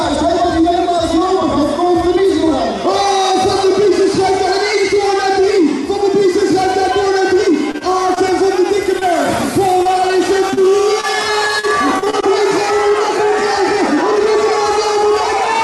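Repeated packet loss (robotic sound) runs from 7.71 to 8.33 s. Four gaps, the longest 27 ms, are each bridged by extending the last sound, so about 13 percent of that stretch is synthetic and it turns choppy.

Short concealed packet loss follows at 8.99 to 9.03 s. About 20 ms of audio arrived too late and was filled by continuing the preceding sound, then blended back into the real signal, which leaves a brief smear or wobble.

Repeated packet loss (robotic sound) returns from 9.83 to 12.24 s. Ten gaps, the longest 38 ms, are again patched by continuing the last sound, with about 10 percent of the span concealed, giving the same broken, robotic texture with pieces dropping out.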